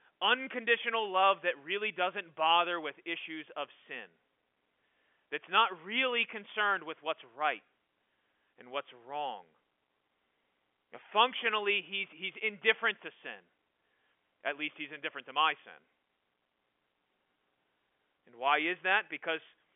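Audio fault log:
No faults are present in this speech clip. It carries the sound of G.711 telephone coding, with a line band of roughly 250 Hz to 3.4 kHz and nothing heard above 3.6 kHz.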